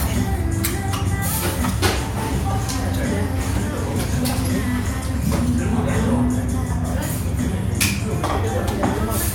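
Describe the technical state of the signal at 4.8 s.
At 4.8 s the audio is intact, with no dropout, clipping, distortion or other fault audible at that moment.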